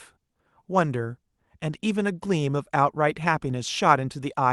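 Nothing goes wrong in this speech recording; it has simply come over an ordinary call link, and the traces of that are the usual coding noise and the cut-off at the top, which fits a call codec whose band stops around 12 kHz.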